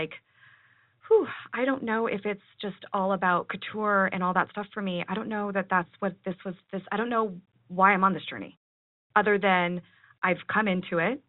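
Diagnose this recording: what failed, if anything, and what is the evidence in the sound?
Nothing stood out on listening to this speech; no stage of the chain shows a failure that can be heard.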